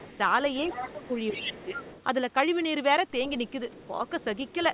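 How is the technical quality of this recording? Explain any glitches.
The speech has a couple of echo-canceller problems layered on a phone-band call path that stops at 4 kHz, which fits a narrowband G.711 codec.

The other side's voice leaking through happens at 0 to 0.18 s, 0.55 to 2.03 s, and 3.47 s to the end. It's faint, well below the talker, and sounds like loudspeaker echo the canceller likely missed.

Speech suppressed in double talk shows up between 0.6 and 1.79 s. The talker dips noticeably in pieces, likely because the canceller ducked both voices while they overlapped.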